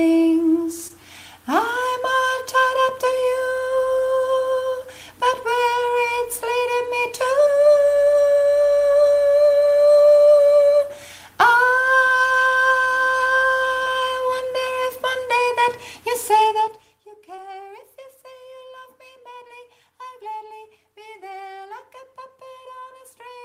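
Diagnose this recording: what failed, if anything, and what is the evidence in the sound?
Short concealed packet loss at the network stage: about 20 ms of audio failed to arrive in time at 0.87–0.92, 13.84–13.88, 17.36–17.40 and 19.48–19.51 s, which fits one lost packet each time. The decoder extrapolated the preceding sound, then crossfaded back, leaving brief smears or wobbles.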